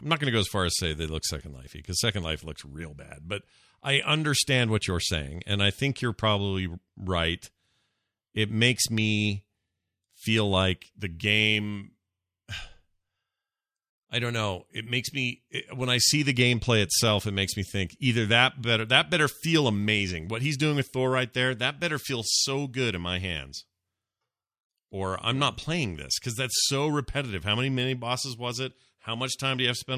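No technical faults can be heard anywhere in the recording.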